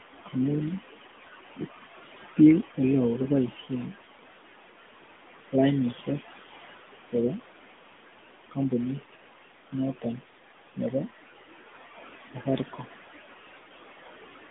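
A speech recording runs through a mobile phone path, and three faults are audible. A noise suppressor acts throughout. The room noise sits about 14 dB below the speech and is cut by about 17 dB between phrases, then rises under the voice. That pumping is audible around the speech. The whole clip also carries the sound of the AMR narrowband mobile codec. The line passes roughly 200 Hz to 3.5 kHz, and nothing reaches above 3.8 kHz, so the voice sounds boxed and dull. The codec damage is plainly audible as a buzzy, synthetic edge, with the codec running at a mode near 10 kbps. From 9.01 to 9.27 s, the noise suppressor cuts into the speech itself. It mistakes part of the voice for noise and pulls it down by up to about 17 dB. Around 150 ms of sound comes out swallowed and faint.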